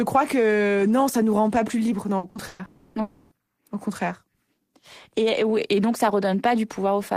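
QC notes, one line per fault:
2.17–2.26 s, 2.29–2.38 s and 2.47–2.62 s, burst of packet loss: right after "rend pas plus libres", about 60, 60 and 120 ms of speech vanish, each patched by extending and fading the last sound. On a spectrogram, the harmonics go flat and smeared. The waveform's envelope decays, then jumps.
2.65–2.98 s and 3.01–3.34 s, long network dropout: each time about 300 ms of speech is lost and the preceding sound is stretched into a fading buzz or hiss, with no true silence left. The likely cause is a network outage. A spectrogram shows frozen, dimming bands, and the waveform shows shrinking amplitude before speech resumes.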